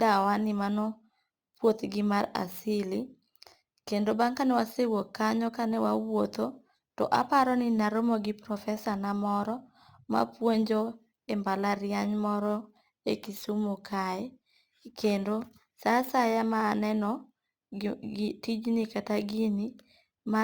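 Crude rate conversion throughout the speech: unfiltered sample repetition, consistent with 44.1 to 48 kHz, adds gritty inharmonic fizz about 30 dB below the voice.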